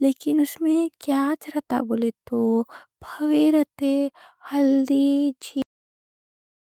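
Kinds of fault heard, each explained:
Cut-off end: the final buffers were never written, so the speech halts mid-sound at 5.62 s and drops straight into digital silence with no decay.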